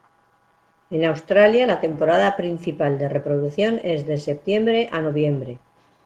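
Clock drift between sender and receiver runs through the whole clip, with the sender's clock about 1.5% slow, so the receiver's buffer keeps draining and must be padded. From 0.12 to 5.99 s, repeated timing corrections repeat short pieces, playing at 99% speed and adding roughly 70 ms. These are heard as faint hiccups, and a waveform or spectrogram shows small duplicated slices at uneven spacing.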